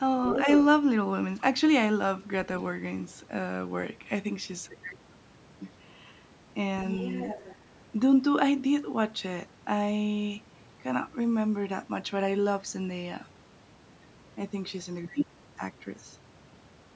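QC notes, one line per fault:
0.28–0.57 s, other side's voice leaking through: a second voice sits nearly as loud as the talker. Likely an echo canceller leaving loudspeaker sound in the microphone.
6.93–7.55 s, other side's voice leaking through: a faint second voice, well below the talker. Likely the same incomplete echo cancellation letting playback back in.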